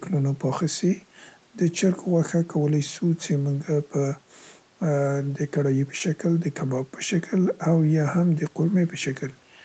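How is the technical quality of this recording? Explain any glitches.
The technical quality of this recording is good, with no glitches to explain.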